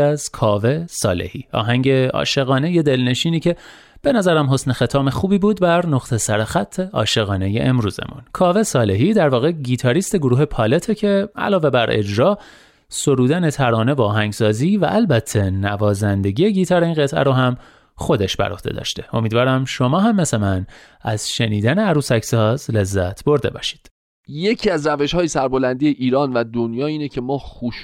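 No technical faults can be heard anywhere in the speech. At no point does anything in the audio go wrong.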